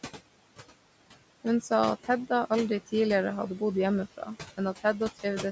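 Speech with noise suppressor artifacts running right through it: the suppressor is pulling the room's steady background down by about 17 dB, frame by frame, so the floor dips between phrases and comes back up underneath them. There's also a short spot of speech cut by the noise suppressor from 4.17 to 4.29 s, right after "aldri tidligere hadde bodd", where about a tenth of a second of quiet speech got mistaken for noise and ducked by up to about 10 dB, so that bit sounds swallowed and faint.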